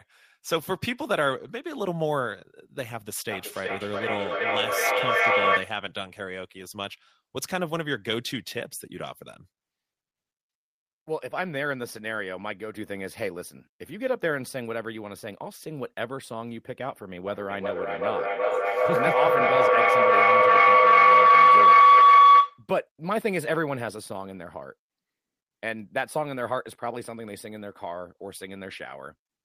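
From 3.3 to 5.82 s there's feedback echo between two devices: speech loops back roughly every 400 ms and piles up to about 7 dB above the talker. At 17.27 s a feedback howl starts, a tone around 1 kHz with a loop delay of about 400 ms, peaking about 14 dB over speech until 22.67 s.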